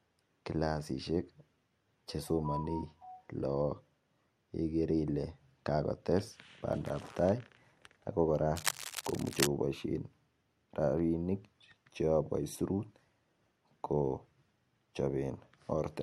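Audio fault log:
8.56–9.47 s, cable scratch noise: for just under a second, dense, uneven bursts of scratchy rustling sit only a little below the speech. This is likely a worn cable or connector being moved, its contact resistance jumping rapidly and injecting noise into the signal.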